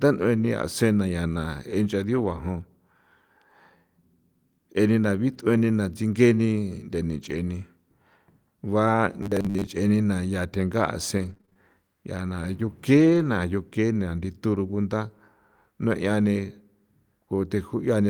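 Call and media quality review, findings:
Lost packet rebuilt from error correction at 2.13–2.35 s, 5.33–5.39 s (after "je nena") and 7.21–7.31 s: no dropout, but rough, noisy frames decoded from the low-bitrate copy carried in the following packet.

Robotic sound from repeated short buffers at 9.23–9.67 s: rigid metallic buzz at 100 Hz. The likely cause is starved playout looping a 10 ms buffer, with roughly half the audio repeated.

Scattered short gaps across 11.17–13.23 s: about seven brief ticks and smears, none longer than about 20 ms. Lost or late packets were each patched by extending the previous sound.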